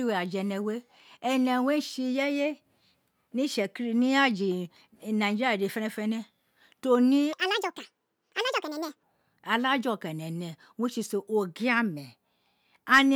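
A stretch of the recording was most likely played back against the wrong clock, running 1.78 times faster than it was captured. The result is a section at the wrong speed from 7.33 s to 9.03 s, just after "to ne". Because speed and pitch are tied together, the speech there jumps up by roughly ten semitones and rushes, sounding squeaky and hurried, then drops abruptly back to its natural pace and pitch.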